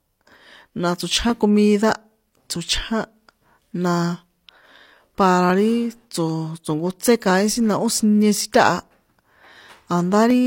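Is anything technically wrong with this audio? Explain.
Yes. From 0.70 to 10.30 s, regular clicks recur about every 0.60 s in the speech: clock drift buffer slips, likely from two unsynchronised clocks roughly 500 ppm apart, each slip dropping or repeating a small block of samples.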